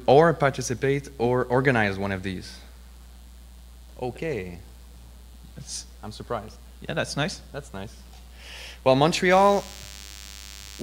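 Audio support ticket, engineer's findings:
DECT cordless phone buzz, 9.32 s to end: thin, harmonic-rich 100 Hz buzz roughly 20 dB under signal. Nearby DECT unit's 10 ms radio bursts are being rectified by the audio circuitry.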